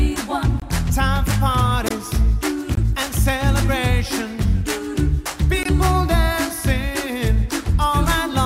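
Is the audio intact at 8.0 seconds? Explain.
Yes, the audio is intact at 8.0 seconds, with no dropout, click, distortion or other fault at that moment.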